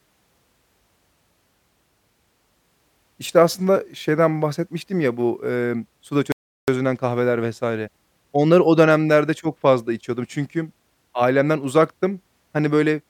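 A recording of speech that cuts out abruptly at 6.32 s, right after "ya bu emm suda", and stays silent until 6.68 s, where it picks up again with "kahveler vs". That 360 ms gap is a playback stall, likely the player running short of buffered data or its thread being blocked. On a waveform it shows as a flat, empty stretch with hard edges; on a spectrogram, a blank vertical band cutting across every frequency.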